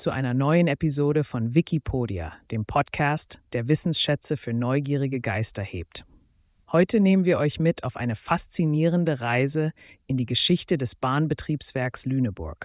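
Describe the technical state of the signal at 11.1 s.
At 11.1 s the signal is intact, with no audible dropout, distortion, glitch or other technical fault at that moment.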